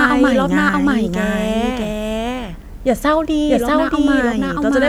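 Throughout, a doubled audio track: the speech repeats equally loud about 0.7 s later, likely via a slower second path. Spectrograms show every pattern twice.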